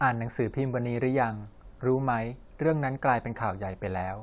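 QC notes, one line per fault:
No faults heard.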